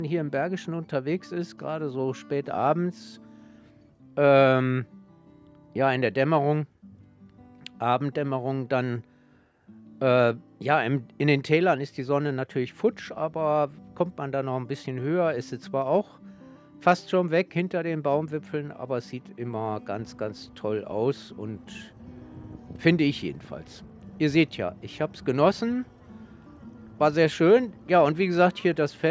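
No technical faults can be heard anywhere in the recording. The audio has passed through a call's microphone processing, which trims away the lowest bass and leaves nothing above 8 kHz.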